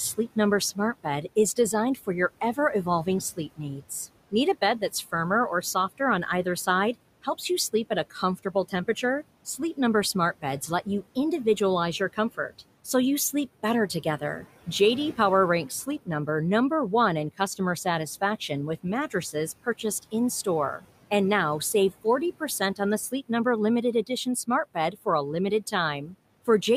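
Noise suppressor artifacts run through the whole recording. The suppressor pulls the steady room noise down by about 17 dB frame by frame, so the residual sinks in pauses and rises again under speech.

At 1.96 to 2.08 s and again at 8.37 to 8.73 s, speech is cut by the noise suppressor. It misreads quiet speech energy as noise and drops it by up to about 14 dB and 13 dB, swallowing roughly a tenth of a second of sound each time.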